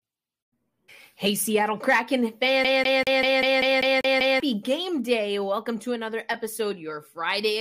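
At 2.64 s the playback locks onto a single turn of the disc, the CD stuck on one turn, as the laser keeps jumping back to the same point. Until 4.40 s the same 0.2 s slice of speech repeats about nine times, each pass cut by a brief mute, giving a rapid, even stutter.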